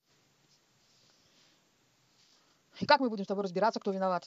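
At 2.13 s the speech suddenly speeds up to about 1.39 times its pace with pitch unchanged, a time-stretched section, likely squeezed to fit, sounding rushed to the end.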